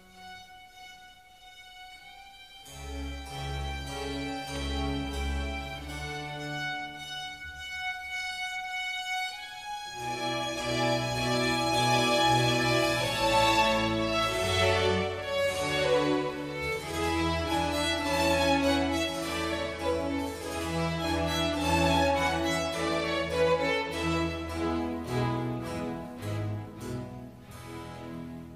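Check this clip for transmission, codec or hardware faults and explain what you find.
Nothing stood out on listening; no transmission, codec or hardware problem could be heard anywhere in the clip.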